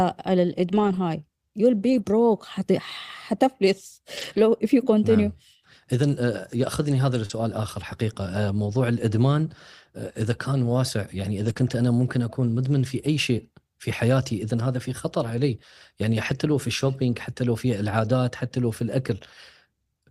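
Packets of this speech were lost, and the decoder rebuilt them from low-bitrate copies carried in the following packets, which is lost packet rebuilt from error correction. There are no gaps, but the audio turns briefly rougher and noisier at 0.71–0.97 s, 1.89–1.99 s, 4.17–4.39 s, 7.29 s, 11.45–11.51 s, 11.57 s, 15.23 s and 16.13–16.31 s. At 7.25–7.31 s and 11.53–11.57 s, audio arrived too late to use, so the receiver extended the preceding sound to fill the hole. This short concealed packet loss sounds like a quick smear or wobble, lasting about 40 ms and 16 ms, just before the rebuilt stretches.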